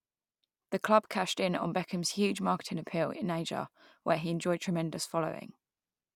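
No technical faults can be heard anywhere in this speech recording, and the signal holds steady throughout.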